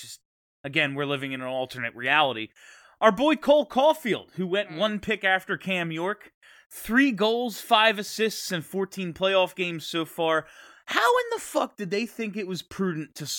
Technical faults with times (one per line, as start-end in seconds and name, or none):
none